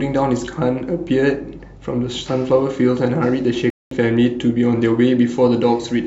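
At 3.70 s the speech cuts to silence for about 0.21 s, then resumes. This playback stall was likely caused by the player running short of data.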